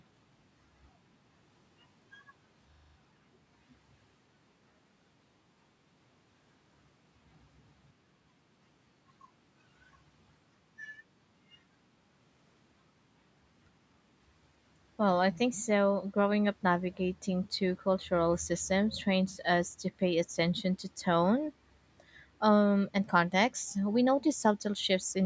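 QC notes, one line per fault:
2.72–2.96 s, system hang loop: a rough 25 Hz buzzing stutter as one 40 ms slice of the speech repeats exactly six times. The system or driver stalled while the hardware kept replaying the same buffer, so about a fifth of a second of speech is missing.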